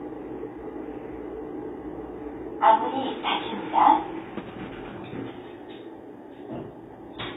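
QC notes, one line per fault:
Throughout: HE-AAC compression. The treble stays bright but sounds grainy and metallic, and it does not blend cleanly with the body of the sound below it. The likely cause is a low-bitrate codec that codes only the lower spectrum and then synthesises the top by copying lower bands upward under a coarse envelope. The copied harmonics do not line up with the real ones. The damage is plainly audible, which fits a bitrate around 20 kbps.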